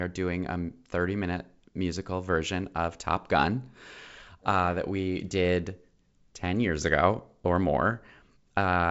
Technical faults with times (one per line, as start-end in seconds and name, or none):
none